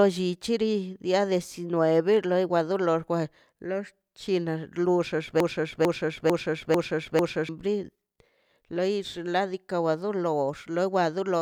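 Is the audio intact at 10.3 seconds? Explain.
Yes, at 10.3 seconds the speech plays through cleanly, with no dropout, click, distortion or other break in the audio.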